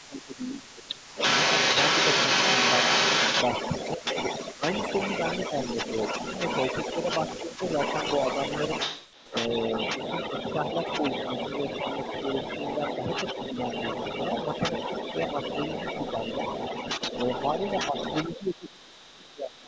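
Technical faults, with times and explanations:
0–19.59 s, echo leak: a second copy of the talker trails the original by about 201 ms for almost the whole clip, sitting only a few decibels away from the direct sound. This is likely a far end on a loudspeaker whose echo canceller didn't fully remove what its microphone picked up, sending that residue back down the line.
0–1.17 s, 3.94–4.04 s, 4.57–4.62 s, 9.3–10.11 s and 17.54–19.67 s, speech suppressed in double talk: the level dips in bursts. The first stretch loses roughly 15 dB over most of a second, the two short ones near 4 s drop about 10 dB, the one around 9.3 s dips only slightly, and the last, deepest at around 20 dB, chops up most of the final two seconds. The likely cause is the canceller treating both sides talking at once as echo and turning everything down. The audio tops out at 8 kHz throughout.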